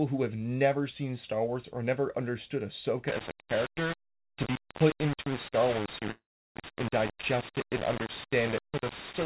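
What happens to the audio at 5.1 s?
Low bit depth without dither runs from 3.08 s to the end. The speech was likely rounded to around 4 bits, so grainy distortion tracks it, only about 10 dB down.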